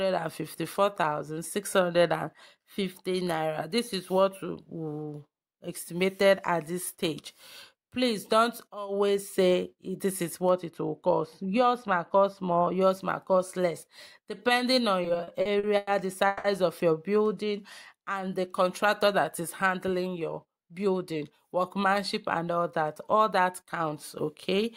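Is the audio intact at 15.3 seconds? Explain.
No. Repeated stalls (stutter) run from 15.03 to 15.89 s: late packets left the jitter buffer empty eight times, and the receiver stretched the last sound to cover about 260 ms, the longest wait 100 ms. Nothing is lost, but the audio drags and stutters.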